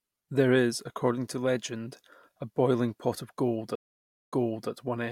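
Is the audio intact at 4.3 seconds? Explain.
No. A stream reconnect spans 3.75 to 4.70 s: a 0.56 s silence, then a restarted decoder resumes the speech 0.38 s earlier, repeating it.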